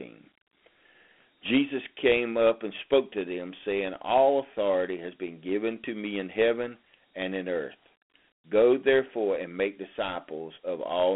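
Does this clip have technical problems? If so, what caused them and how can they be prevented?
Yes. Dialogic VOX ADPCM coding runs throughout. Nothing sounds above 3.8 kHz, and the 4-bit steps leave gritty hiss trailing the speech. Prevent it by recording at higher resolution.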